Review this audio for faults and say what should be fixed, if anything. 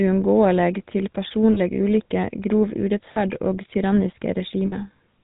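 The speech carries the buzzy, gravelly roughness of the GSM full-rate codec throughout, with nothing above 4 kHz. The vocal-tract model, driven by regularly spaced pulses with only every third excitation sample kept, plainly colours the sound, consistent with 13 kbps coding. Use a wideband or higher-rate codec on this path.

Lost GSM frames cause brief rough, metallic ringing at 1.54 to 1.60 s, 3.14 to 3.21 s and 4.66 to 4.75 s. The decoder repeated the last good frame's settings. The first two events suggest about 20 ms lost each; the third points to roughly three consecutive frames, about 60 ms. Reduce frame loss with better channel protection or redundancy.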